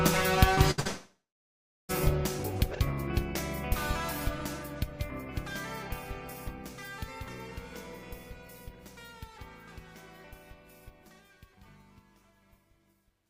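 At 0.55 to 0.59 s there is a short concealed packet loss. About 20 ms of audio never arrived, and the receiver papered over it by extending the preceding sound. It is heard as a brief smear, and a spectrogram shows a thin band of blurred, repeated texture.

Two bursts of packet loss follow back to back, at 0.71 to 0.80 s and 0.80 to 0.87 s, each losing about 60 ms. Each time, the last sound is stretched out and fades, giving a held, dimming tail. On a spectrogram these appear as smooth, decaying streaks. The waveform envelope sags, then jumps where the real audio resumes.

From 0.87 to 1.91 s comes what is likely a long network dropout. The concealed tail dies away, and roughly the final 720 ms is plain silence before the sound returns mid-stream with a piece missing. This shows as a flat waveform and an empty spectrogram column.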